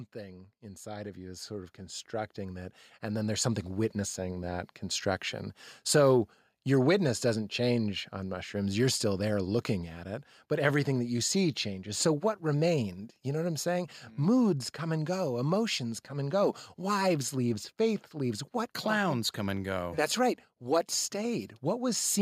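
Automatic gain rising, from 0.13 s to 4.79 s: the gain control judged the incoming speech too quiet and kept turning its gain up over nearly five seconds, by about 16 dB in total. Because the boost is applied to the whole signal, the voice and the room noise behind it swell upward together, so the opening sounds quiet before settling at a noticeably louder, noisier level.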